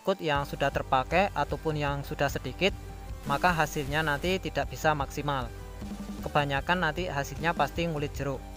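A stuck bit runs from 3.23 to 4.34 s, where the sound turns grainy and noisy for just over a second before clearing. The likely cause is one data line or converter bit held fixed at 0 or 1, so that roughly half of the samples are pushed off their true value by that bit's weight. The error tracks the shape of the waveform, and the resulting step of roughly -45 dBFS produces a gritty distortion layered over the audio.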